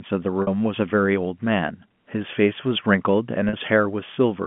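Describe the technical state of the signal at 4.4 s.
At 4.4 s the signal is intact, with the sound carried cleanly through its G.711 telephone channel and no fault at that moment.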